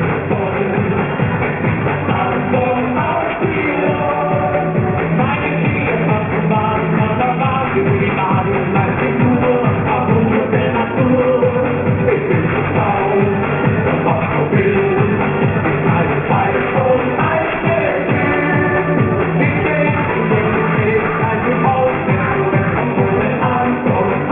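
Aliasing runs through the whole clip. The audio was resampled to a much lower rate without an anti-aliasing filter first, and the sound points to a rate of about 6 kHz, folding at 3 kHz. Everything that sat above that point reflected back down as spurious, unrelated tones, roughly 10 dB below the wanted sound. Bright, noisy parts turn gritty and metallic, and the energy stays dense right up to the 3 kHz edge instead of rolling off.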